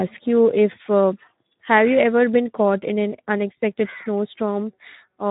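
Speech runs through Speex codec damage for its whole length: the excitation is starved of bits, so the voice sounds hoarse and noisy, which fits a narrowband setting around 11 kbps. Nothing is present above 3.8 kHz. Unlike a plain low-pass filter, the roughness sits inside the voice itself, and unlike MP3-style damage there is no swirly, watery smearing, only a buzzy, grainy quality.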